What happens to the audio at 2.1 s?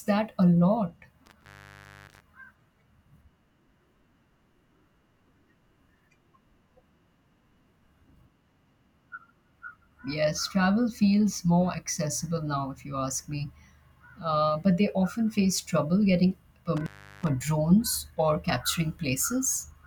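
At 2.1 s the speech is still caught in a dropout: just after "that a lot" the sound crackles, then falls away to a faint hiss, with the disturbance running from about 1.26 to 2.22 s. This is an intermittent contact, a loose cable or plug briefly losing its connection. The line stays open for about 0.63 s, so the signal vanishes, and the scraping metal contacts produce crackle as the connection breaks and returns.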